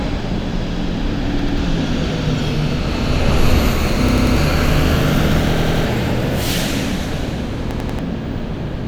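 A hard-edged stutter, one short slice of sound repeating back to back, hits at 1.39 s, 4.09 s, 5.57 s and 7.71 s. Each is a repeated buffer: audio arrived late, so the same roughly 93 ms chunk, consistent with a 4096-sample buffer, replayed two or three times.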